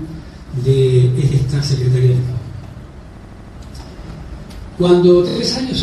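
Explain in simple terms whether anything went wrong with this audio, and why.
The audio stutters in three places because of repeated frames: short stretches of the compressed audio were played again, like a record skipping. At 1.31 to 1.41 s a 0.1-second piece sounds twice. At 3.16 to 3.56 s a piece of about 0.08 s repeats five extra times. At 5.28 to 5.36 s a tiny 26 ms piece repeats three extra times. Unlike a dropout, nothing goes missing. The same moment plays again, which adds time.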